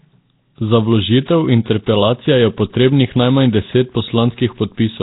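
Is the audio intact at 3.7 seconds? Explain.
No. Nellymoser compression spans the whole clip, 3.7 s included. Speech sounds rough, hissy and underwater, with nothing above 3.8 kHz. The likely cause is heavy coding near 16 kbps.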